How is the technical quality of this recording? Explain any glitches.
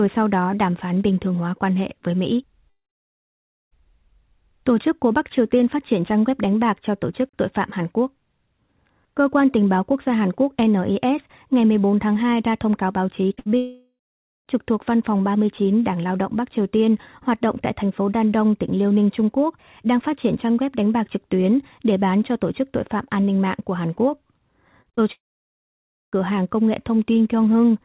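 The recording has several network glitches clustered at three points, plus a faint roughness throughout, all heard through narrowband telephone audio with nothing above 4 kHz.

Sample clock jitter runs through the whole clip. The converter's clock wobbles by a few microseconds, so each sample lands slightly off time, and the error grows wherever the waveform changes quickly. The result is a grainy hiss roughly 35 dB below the speech that swells on loud, bright syllables and disappears in pauses. That dependence on the signal separates it from steady background noise, which would stay audible in the gaps.

Long network dropouts occur at 2.70 to 3.73 s, 13.57 to 14.48 s and 25.13 to 26.14 s. Each is likely a stall in packet arrival lasting about a second. The receiver extends the last sound briefly, then leaves about 0.93, 0.53 and 0.94 s of near-silence before speech resumes further on, with the intervening audio gone. 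The extended stretch of dead air is what marks these as dropouts rather than the short concealed losses, which never fall silent.

Short concealed packet loss occurs twice just after "thông cáo báo chí", at 13.29 to 13.32 s and 13.34 to 13.39 s. Each hole, 20 and 40 ms long, is patched by continuing the preceding sound and blending back into the real audio. This produces quick smears or wobbles rather than audible gaps. They are too brief to swallow more than a consonant, which sets them apart from the longer burst that follows.

A burst of packet loss follows immediately, from 13.39 to 13.55 s. About 60 ms of consecutive packets never arrived. The decoder held the last sound as a fading buzz or hiss across the gap, then resumed with that fragment missing. It runs longer than the isolated smears before it but has no true silence, unlike the dropout starting at 13.57 s.

Repeated packet loss, with its robotic sound, appears from 24.82 to 25.03 s, just before the final dropout. 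Four separate holes, the longest 34 ms, leave roughly half of that span concealed. Each patch barely ends before the next begins, giving a choppy stutter. It is the repetition within a short window, rather than one continuous gap, that distinguishes this from a burst.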